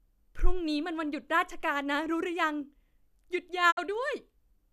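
At 3.70 s the speech fades out over about 20 ms and stays silent until 3.79 s: a digital broadcast dropout, with the receiver muting through corrupted frames, consistent with two lost frames.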